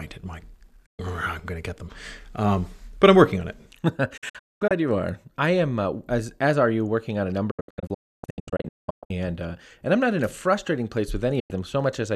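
Speech with a digital broadcast dropout: the receiver loses frames and mutes with quick fades at 0.86 s, 4.17 s before "you are I am", 7.51 to 9.11 s after "you working on a", and 11.39 s after "in a frustrating place".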